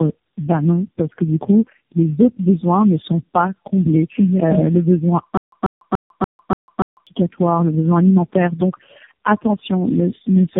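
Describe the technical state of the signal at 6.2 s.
At 6.2 s you're in the middle of a stutter with silent gaps, running from 5.37 to 7.07 s right after "le besoin". A 140 ms fragment replays six times, each followed by about 149 ms of dead silence, so it pulses every 289 ms until "le besoin alimentaire" resumes. The likely cause is a stalled stream that repeats its last chunk.

Underneath that, there's tandem speech coding across the whole clip. Nothing comes through above 3.8 kHz, and the rough, muffled, warbly texture fits about four speech codecs in a row, each re-encoding the previous one's damage.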